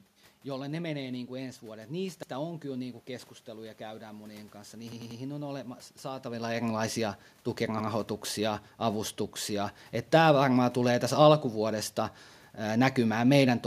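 At 4.92 s a repeated buffer fault begins and runs to 5.20 s. The incoming audio did not reach the playback device in time, so it replayed the last block it held. A segment of about 93 ms of the speech is heard three more times, each repeat meeting the next at a hard edge. The result is a brief mechanical stutter. The block length fits a 4096-sample buffer, and no speech seems to be dropped. Near 6 s the level shift is the talker moving, not a fault.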